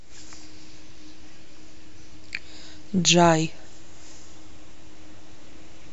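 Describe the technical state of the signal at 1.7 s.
At 1.7 s the speech signal runs cleanly, with no dropout, clipping, glitch or other technical fault at that moment.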